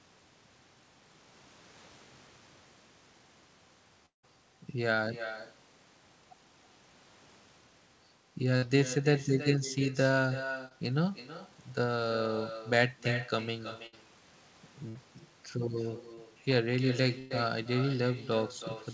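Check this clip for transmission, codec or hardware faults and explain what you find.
Four kinds of fault are present: an uncancelled echo throughout, one long gap, four packet-loss bursts and two short concealed losses. Above 8 kHz there is nothing, which fits G.722 at 64 kbps on the call path.

Echo with no canceller runs through the whole clip. The far end's loudspeaker feeds its microphone, and nothing subtracts that signal, so the talker's own audio returns after the network round trip. Every phrase is shadowed roughly 300 ms later by a thinner copy about 12 dB down.

The long network dropout is at 4.06 to 4.25 s. The likely cause is that no packets arrived for about 180 ms. The receiver extends the last sound as a fading buzz or hiss for around 30 ms, then leaves about 140 ms of silence before the audio resumes further on.

Bursts of packet loss occur at 8.57 to 8.64 s, 13.86 to 13.95 s, 14.89 to 14.97 s and 17.19 to 17.32 s. 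Runs of packets were lost or arrived too late, 60 ms each in the first three and 120 ms in the last. Concealment holds the preceding sound as a decaying buzz or hiss, then jumps ahead.

Short concealed packet loss occurs at 10.68 to 10.72 s and 16.15 to 16.19 s. About 20 ms of audio missed the decoder each time. The receiver patched it from the previous pitch or shaped noise, which leaves a brief smear or wobble where a consonant may drop out.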